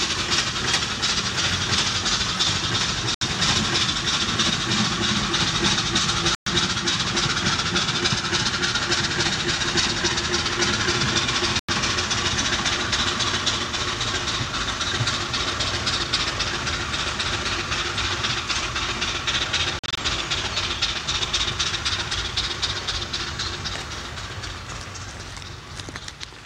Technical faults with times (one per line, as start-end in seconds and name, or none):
3.14-3.22 Bluetooth dropout
6.35-6.47 Bluetooth dropout
11.59-11.69 Bluetooth dropout
19.79-19.98 Bluetooth dropout